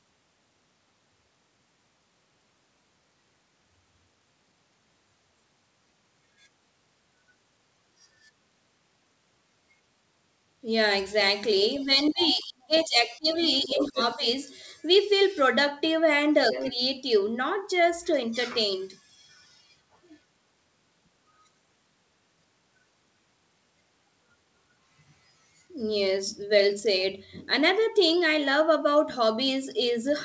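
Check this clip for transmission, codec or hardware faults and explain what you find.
Two related echo-canceller faults appear, both tied to moments when the far end was talking over the speaker.

Speech suppressed in double talk occurs from 11.79 to 14.24 s and again from 16.72 to 16.80 s. When both sides spoke at once, the echo canceller likely could not tell the local talker from loudspeaker echo and pulled the whole microphone signal down. In the first stretch the voice dips and breaks up for around a second and a half in total, falling by as much as about 25 dB. The second is a brief dip of about 10 dB.

The other side's voice leaking through is heard at 11.99–12.29 s, 12.75–12.84 s, 13.28–14.03 s and 16.52–16.72 s. The far-end audio played on the device's loudspeaker was likely not fully removed from the microphone feed, so scraps of a second voice come through underneath. The longest, at 13.28–14.03 s, and the one at 16.52 s sit only about 10 dB below the talker. 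The earlier two are fainter, around 15 to 20 dB down. The last leak runs straight into the short suppression at 16.72 s.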